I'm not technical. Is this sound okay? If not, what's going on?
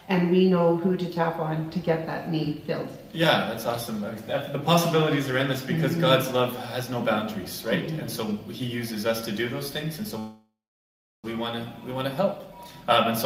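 No. At 10.19 s the sound stalls: the last bit trails off into a fading buzz, then about 0.7 s of silence, before resuming at 11.26 s exactly where it left off, with nothing lost. This call audio freeze likely came from data arriving late, leaving a one-second pause.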